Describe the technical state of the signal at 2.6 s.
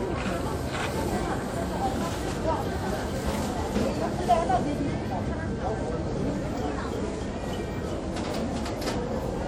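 At 2.6 s you're hearing WMA compression, and it isn't specific to that moment; the damage runs through the whole clip. The most likely cause is an early WMA 1 encoder with long transform blocks. Its quantisation noise spreads over tens of milliseconds, so the sound rings and smears, and the faint detail gets dropped. A hiss also swells and fades with the signal. It's clearly audible, which fits a bitrate around 48 kbps, with nothing left above 20.1 kHz.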